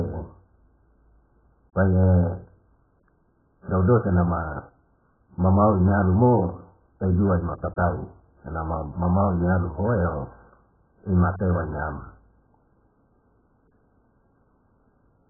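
Likely AAC compression at a very low bitrate, around 8 kbps, throughout: nothing survives above 1.7 kHz, leaving the speech dull, smeared and warbling, with fizzy sibilants.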